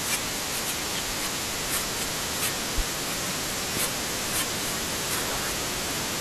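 At 3.77 to 3.81 s a single loud pop, roughly 10 dB above the speech, likely from a voltage spike; unlike a dropout, the speech continues underneath.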